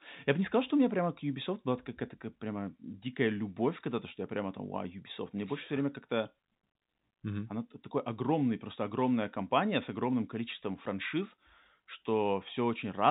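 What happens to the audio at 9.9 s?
Nothing goes wrong at 9.9 s: the speech carries on intact through that moment, with only the band-limited telephone sound of G.711 coding, which passes nothing above about 3.8 kHz.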